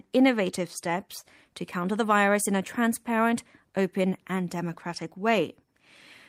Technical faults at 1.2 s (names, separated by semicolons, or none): short stall from a late packet